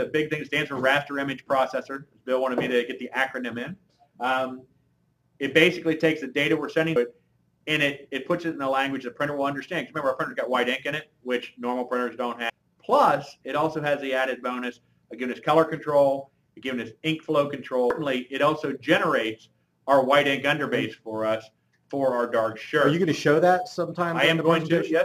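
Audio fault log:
6.96 s, 12.50 s and 17.90 s: damaged data in a compressed stream. Each event is a brief blip of about 4 ms. At these points the compressed data was corrupted. Bytes were lost or overwritten. The decoder could not read those frames correctly. It lost sync and had to find the next valid frame header. What comes out in that gap is a brief glitch, heard as a chirp, squawk, click or short hole in the sound.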